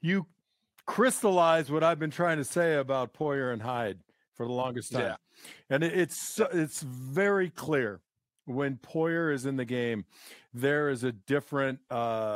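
Listening to this speech recording, nothing stood out as a technical problem.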